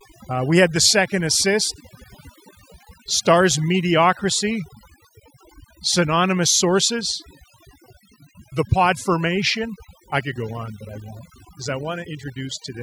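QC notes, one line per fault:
Throughout, overdone noise removal: an over-aggressive noise reduction pass drops individual frequency bands toward silence whenever they sit near the noise estimate, taking quiet speech detail with them. The result is a near-silent floor dotted with twinkling specks. On a spectrogram the background shows as dark gaps speckled with isolated bright dots, and the speech harmonics look ragged and patchy.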